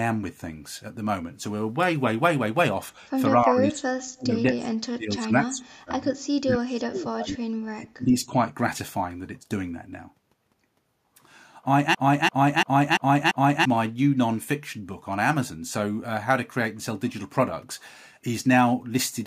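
From 3.44 to 8.36 s the speech is pulled down in four stretches: 3.44 to 3.83 s, 4.12 to 6.02 s, 6.41 to 7.3 s and 7.64 to 8.36 s. This is speech suppressed in double talk, likely from an echo canceller that could not separate the near talker from loudspeaker echo while both sides were active and attenuated everything. The dips reach about 15, 30, 35 and 20 dB. The deeper ones make the sound fade almost out in patches, with several seconds affected in total.

Inside the second stretch, from 4.19 to 4.23 s, a brief echo leak appears. A faint copy of the audio arrives 224 ms late, sitting about 30 dB below the direct speech. The likely cause is a far-end canceller on a loudspeaker path that let a fragment of its microphone pickup through and sent it back.

From 11.95 to 13.65 s a system hang loop takes over. The output replays one 341 ms segment five times, which fits a 16384-sample ring buffer being cycled while the host or driver stalled. 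Repeating at 2.93 Hz, this long loop produces a slow, mechanical stutter rather than a buzz. About one and a half seconds of real audio are lost and replaced by the repeating block.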